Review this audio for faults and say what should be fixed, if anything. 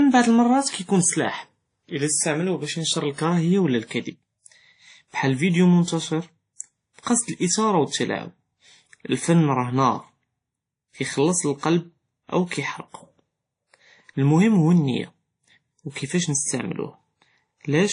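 Throughout, the speech carries several codecs' artefacts together with nothing above 10.1 kHz, likely transcoding between lossy codecs: each re-encode stacks new artefacts and keeps the lowest cut-off. To prevent it, re-export from the original uncompressed source and apply only a single lossy encode at the final delivery stage.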